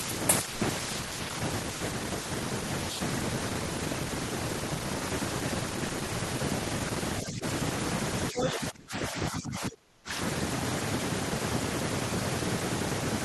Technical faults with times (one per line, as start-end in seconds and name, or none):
0.55-0.60 sound dropped by the voice detector
1.08-1.11 sound dropped by the voice detector
1.79 sound dropped by the voice detector
7.22-7.44 speech suppressed in double talk
8.31-10.11 speech suppressed in double talk